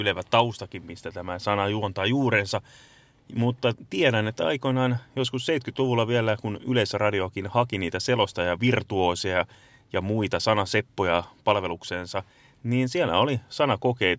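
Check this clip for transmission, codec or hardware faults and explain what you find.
Nothing faulty turns up on listening, as the speech signal stays continuous and stable throughout with no audible disturbance at any point.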